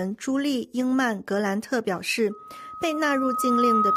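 A microphone picking up its own loudspeaker causes loudspeaker feedback squeal from 2.30 s to the end: a 1.3 kHz tone swells over about a second and a half until it sits above the sound.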